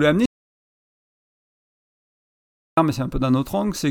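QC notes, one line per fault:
0.26–2.77 s, audio dropout to silence: speech cuts off mid-flow into 2.5 s of dead silence with no room tone, unlike a fade or gate; likely a lost input.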